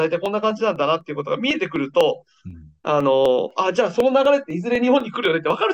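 From 0.26 s to 5.5 s there are periodic USB or driver dropouts: every 0.25 s something stalls the audio path and a sliver, around half a millisecond, gets skipped outright. You hear it as a steady ticking, around twenty small clicks while sound is present.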